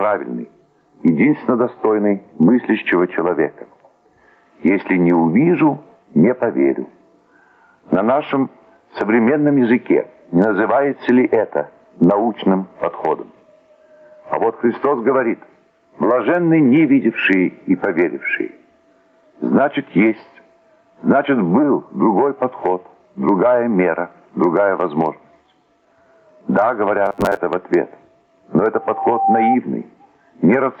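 Across the whole recording the level breathes: the gain drops under each loud sound by around 15 dB, leaving everything squashed. This gain pumping is likely a fast limiter or compressor fighting excessive input gain, and on a waveform it shows as a flattened envelope with the noise floor rising between peaks. From 27.06 to 27.37 s the audio turns into a rigid, metallic buzz at 100 Hz. This is robotic sound from repeated short buffers, likely caused by audio arriving too seldom so that a segment of about 10 ms is looped while most of the real signal is skipped. A spectrogram shows evenly spaced horizontal harmonics of 100 Hz replacing the normal texture. From 28.75 to 29.57 s a loudspeaker feedback squeal appears: a single 783 Hz tone swells over roughly half a second until it sits a few decibels above the rest of the sound. The microphone is picking up the speaker it feeds, and the loop gain exceeds one at that frequency. 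On a spectrogram it is a bright, thickening horizontal line. Throughout the clip, nothing appears above 8 kHz, a band limit from the call path.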